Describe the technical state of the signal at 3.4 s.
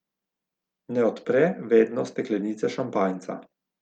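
At 3.4 s the speech is inside a stretch of repeated timing corrections running from 1.65 s to 3.75 s. The receiver is stretching the audio to keep pace with a slower source. It repeats short pieces, and playback runs at about 98% speed. Roughly 50 ms is added across the stretch. The edits are small and unevenly spaced. They are heard as faint hiccups and a slightly dragging, unsteady tempo.

The cause is clock drift between sender and receiver, present throughout the clip. The sender's clock runs roughly 2% slower than the receiver's. Samples arrive a little too slowly, so the jitter buffer keeps draining. The receiver must fill the gap by repeating material. At 3.4 s this drift is what produces the stretched, slightly stuttering delivery of the speech.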